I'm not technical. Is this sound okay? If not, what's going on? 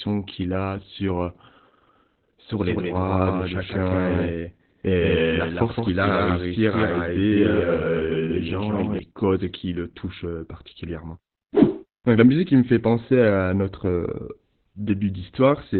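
No. The whole clip has heavy Opus voice compression. The recording was squeezed hard to save data, so everything above about 4.3 kHz is gone. Speech sounds muffled, hoarse and a little robotic, like a poor phone line.

From 2.57 to 8.99 s there is a doubled audio track. A second copy of the same speech plays a split second behind, around 150 ms, and a bit quieter. It starts and stops abruptly, ending just before "causes qui le touchent". It was likely captured twice through a slower path.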